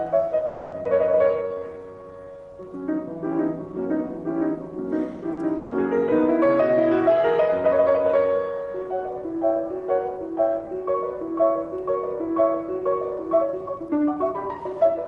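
From 0.45 to 0.74 s there is a call audio freeze, likely caused by packets held up in transit that left the jitter buffer empty. The last sound is stretched into a fading buzz or hiss for about 270 ms, then the audio resumes exactly where it stopped, with nothing lost.

At 0.84 to 0.87 s the audio skips ahead. With later audio already queued, the receiver dropped roughly a fifth of a second and joined the two sides almost directly, with only a 10 ms seam. The jump cuts the delay by roughly 150 ms.

From 1.36 to 2.38 s a jitter buffer slow-down is at work. Running low or after raising its target delay, the buffer built a reserve by repeating single pitch periods and bits of pause, adding 180 ms. The sound plays at 83% speed with unchanged pitch, drawn out.

At 5.33 to 5.39 s a short stall from a late packet occurs. The packet missed its slot, so the receiver held the last sound for 40 ms until it arrived. 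Nothing is skipped, but one sound lingers too long with a slight buzz or dip.

From 5.57 to 5.73 s a burst of packet loss leaves the receiver with 140 ms it never gets. It extends the preceding sound while turning it down, then jumps forward. That 140 ms of audio is gone.

From 13.23 s to the end, a jitter buffer speed-up trims excess buffered delay by cutting short pitch-period pieces, around 300 ms in all. Playback runs at 113% speed at the same pitch and sounds hurried.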